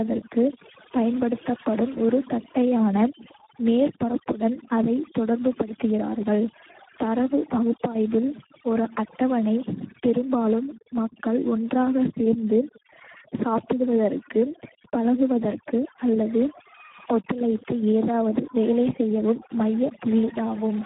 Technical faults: overdone noise removal; Speex codec

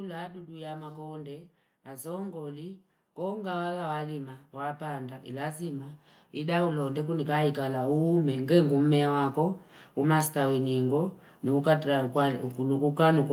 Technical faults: automatic gain rising

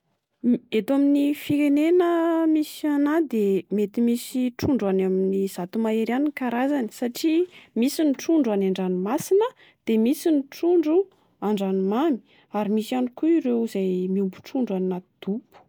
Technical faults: none

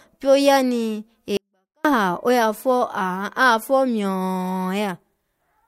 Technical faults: 24-bit alignment error (too quiet)

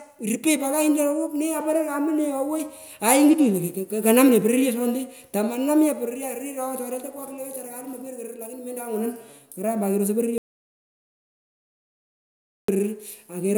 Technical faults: audio dropout to silence

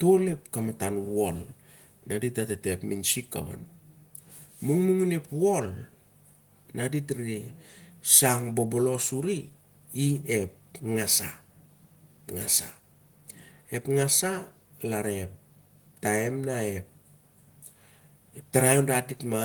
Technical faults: none

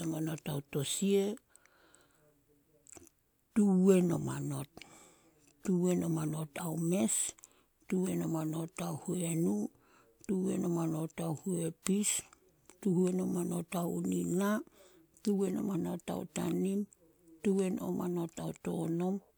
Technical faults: none

